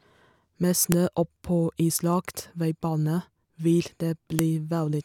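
At 0.92 s, just before "oppå islagt veibane vil", a sharp, loud click cuts through the speech, and a second snap follows at 4.39 s, right after "oppå islagt veibane vil". Both are a file header played as audio: the speech was joined from separate WAV pieces without stripping their headers, so a few dozen header bytes were decoded as samples, producing a brief spike at each join regardless of the speech around it.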